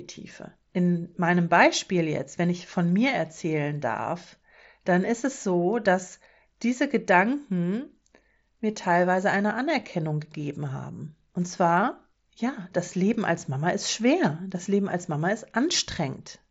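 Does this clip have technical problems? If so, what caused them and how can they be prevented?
No, the speech arrives intact over what sounds like a Bluetooth mSBC headset link, with the wideband ceiling around 8 kHz that this path normally imposes and nothing wrong in the signal itself.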